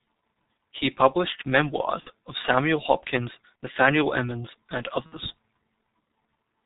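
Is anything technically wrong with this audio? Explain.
Yes, two things. Throughout, there's heavy G.723.1 codec damage: nothing above 4 kHz survives and the voice model updates only every 30 ms, so speech comes out muffled and hoarse with smeared consonants, which fits a coder running around 6 kbit/s.

There's also VoIP packet loss concealed by the speech codec at 2.00 to 2.11 s, at 3.65 s, and at 5.06 to 5.17 s. The decoder fills each gap by extending its last pitch and filter while fading the gain, so you hear a brief buzzy or noisy smear. The longer two sound like about 60 ms lost, two frames each, and the voice stays weak just afterward.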